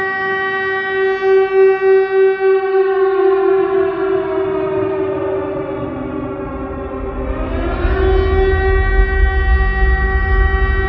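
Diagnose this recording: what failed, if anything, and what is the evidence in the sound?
Nothing in the signal chain points to a failure: level, continuity and timing hold steady throughout, with no audible disturbance attributable to any stage between capture and playback.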